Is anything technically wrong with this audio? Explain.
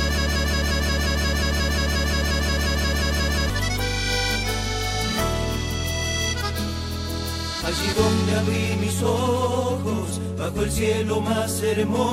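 Yes. From 0 to 3.5 s there is a broken-record loop, likely a stalled player or stream resending the last fragment it held. A 0.18 s piece repeats exactly, back to back, 19 times, already under way at the start, and the audio meant for that span is lost.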